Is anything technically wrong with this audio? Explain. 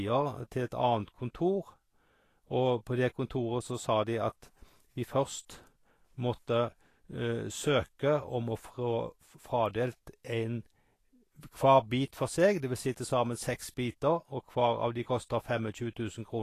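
Yes. Throughout the speech, the sound most likely passed through low-quality Vorbis compression, at a rate that points to something near 35 kbps. The encoder appears to have dropped everything above 14.2 kHz and quantised the remaining treble so coarsely that fine high-frequency detail was swapped for noise of similar energy. The damage is plainly audible: the voice turns hissy and grainy, tonal parts of the voice sound roughened, and consonant onsets lose their sharpness.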